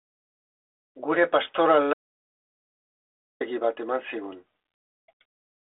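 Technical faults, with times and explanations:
1.93 to 3.41 s: audio dropout to silence. The speech cuts off abruptly, leaving 1.47 s of silence with no room tone or line hiss, then resumes mid-flow. The input was likely lost while the recorder kept writing silence.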